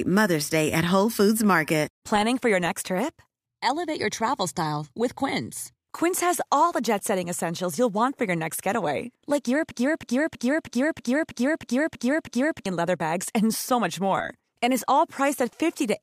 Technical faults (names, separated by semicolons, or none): broken-record loop